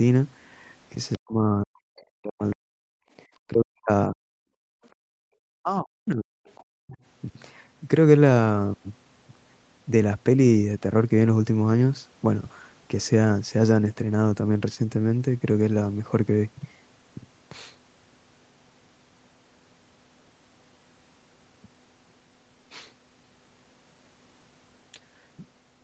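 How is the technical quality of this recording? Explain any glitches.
The recording has echo-control problems in its first seven seconds, with the speech band topping out at 8 kHz, which fits a wideband Opus call path.

Other side's voice leaking through: at 1.13–1.17, 4.84–4.88 and 6.46–6.63 s, a faint second voice is heard, roughly 30 to 40 dB below the talker. It is likely loudspeaker echo the canceller missed. It is an added sound, not a loss.

Speech suppressed in double talk: at 1.17–3.01, 3.49–4.18, 5.6–6.33 and 6.65–6.96 s, the talker's own voice dips by up to roughly 40 dB. This is likely the canceller muting everything while both sides spoke.

Background gated by the echo canceller: from 4.46 to 5.32 s, the room sound, rather than the voice, drops by about 40 dB for roughly 0.7 s. The canceller clamped the microphone during loudspeaker playback, then released it.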